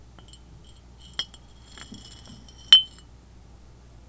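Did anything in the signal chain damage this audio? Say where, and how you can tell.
No, nothing along the chain seems to have harmed this recording of sounds, and there's nothing to point to at any moment in it.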